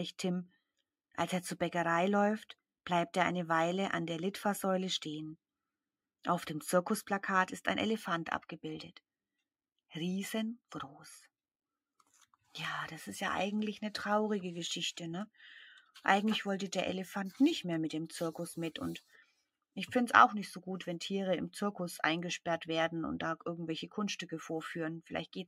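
At 19.06 to 19.41 s the noise suppressor misjudged part of the wanted sound as noise and attenuated it, a sound cut by the noise suppressor. The level sinks by up to about 14 dB, leaving roughly a fifth of a second quieter.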